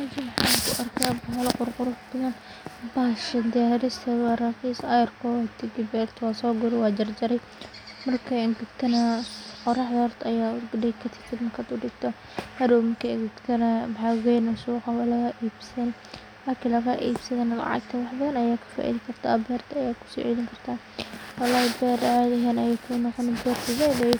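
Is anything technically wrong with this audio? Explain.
No, the speech signal shows no audible technical faults anywhere in the recording.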